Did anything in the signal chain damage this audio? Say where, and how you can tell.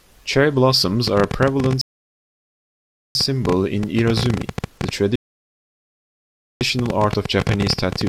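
Yes. A train of clicks starts at 1.08 s and runs to the end. The clicks come about 14 times a second at uneven spacing, roughly seventy in all, peaking well above the sound. They persist through pauses. The likely cause is interference in the analogue wiring or a faulty connection or power supply.

Two rebuffering stalls occur at the network and playback stage. The sound cuts to silence from 1.81 to 3.15 s, adding 1.34 s, and again from 5.16 to 6.61 s, adding 1.45 s. Each time it resumes exactly where it stopped. The player's buffer ran dry.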